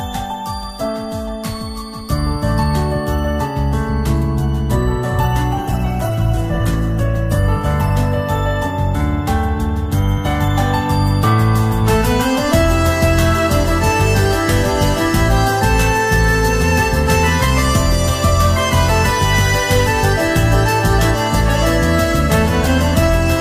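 From 5.59 s to 9.49 s, a call bitrate drop takes the encoder from 128 kbps to 14 kbps, at its lowest for 1.34 s. Coarser coding and a lost top end make the sound rough and muffled. Unlike packet loss, there are no gaps.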